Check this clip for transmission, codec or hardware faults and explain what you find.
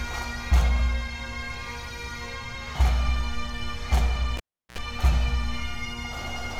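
One hardware fault is present: a cable pulled and plugged in, from 4.37 to 4.78 s. A live lead comes out with a pop. The sound then drops to near silence for about 0.36 s. As the plug re-enters, its tip touches first and picks up 60 Hz mains buzz for about 68 ms. A second pop follows as full contact brings the sound back.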